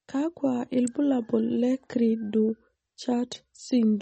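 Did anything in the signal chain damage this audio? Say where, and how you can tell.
Yes. MP3 compression runs throughout at the codec stage: plainly audible watery, swirly artefacts and nothing above 8.4 kHz point to a low bitrate near 33 kbps.

An electrical switching spike at 0.87 s in the analogue wiring sounds like a sharp snap over the speech, likely a nearby switch or discharge arcing into the line.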